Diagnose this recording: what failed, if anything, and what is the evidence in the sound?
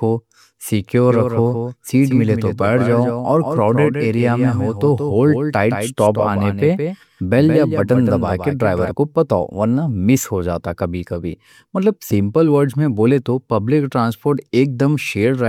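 Doubled audio track from 1.09 to 8.91 s: the speech is joined by a full-band copy trailing by roughly 150 ms, about 5 dB quieter, dry and without room colour, starting and stopping abruptly. Likely cause: a slower second capture path at the driver or routing stage mixing into the recording.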